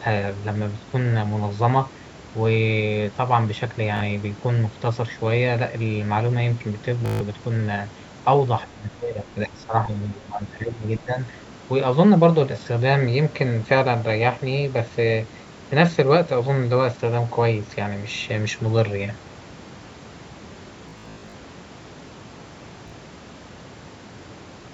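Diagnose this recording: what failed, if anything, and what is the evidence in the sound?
Bluetooth stutter at 3.97–4.01 s, 7.06–7.21 s, 20.89–21.34 s and 22.88–22.92 s, on the wireless link. When packets went missing, the receiver looped its last buffer, giving short buzzing repeats of 37 ms, 149 ms and 37 ms, and 280 ms scattered over 448 ms near 21 s.

Speech suppressed in double talk, in the call processing, from 8.66 to 11.17 s. The speech dips by roughly 15 dB and breaks up for about two seconds in total, likely because the echo canceller mistook simultaneous talk for echo and attenuated both.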